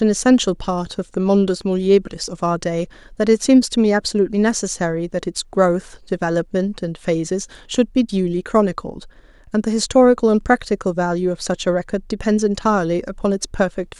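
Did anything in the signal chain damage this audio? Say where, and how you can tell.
No, nothing in the signal chain damaged this speech recording. No stage along the way leaves an audible mark, so there is nothing to place or explain.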